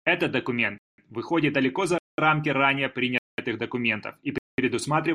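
Silent holes cut into the speech at 0.78–0.98, 1.98–2.18, 3.18–3.38 and 4.38–4.58 s. Each lasts 200 ms. This is a gap between chunks. The audio arrives in 1-second pieces, with silence inserted at each join. Nothing is lost, but the speech is interrupted at every join.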